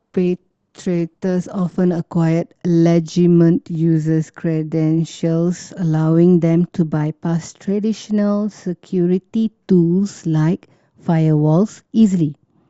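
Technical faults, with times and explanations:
0.0 to 2.0 s, adaptive stream starting at a low bitrate. The speech opens dull, with the treble missing or sounding synthetic. Codec artefacts are strong. The player began on a cheap version of the stream so playback could start fast. The sound suggests something like Opus at 16 kbit/s. At 2.0 s the quality jumps with no gap, which fits a step up to about 64 kbit/s once the connection was measured.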